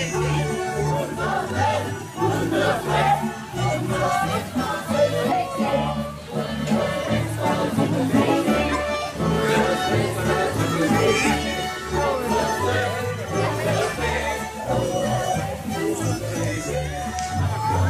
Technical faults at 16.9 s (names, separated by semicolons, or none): none